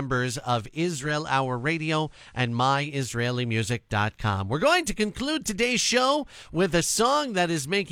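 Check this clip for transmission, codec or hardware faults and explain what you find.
One fault is present: digital radio blending to analogue, from 0.95 s to 2.97 s. The receiver lost its digital stream and cross-faded over about 237 ms to the FM broadcast, then back. Faint hiss appears well below the speech, with no level change.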